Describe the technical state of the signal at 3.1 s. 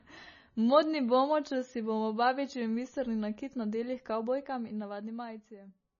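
At 3.1 s the speech carries heavy MP3 compression throughout, likely from a 24 kbps encode: nothing above 6.9 kHz, watery swirling and smeared attacks, unlike simple low-pass filtering.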